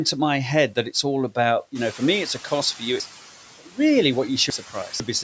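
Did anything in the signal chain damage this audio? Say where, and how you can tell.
Yes. The call's noise suppressor leaves artifacts all the way through: it cuts steady noise by about 9 dB per band, so the noise sinks between words and rises under them.

The noise suppressor is catching up from 1.75 to 2.65 s, after "that it's all about". The room noise jumps about 14 dB near 2 s, and the suppressor's estimate takes around 900 ms to adapt, reaching about 6 dB of cut before "for you".

The driver or buffer stage wrote chunks out of order between 3.0 and 5.0 s, just after "for you". A 500 ms chunk plays three chunks late, leaving three hard joins and a jumbled stretch.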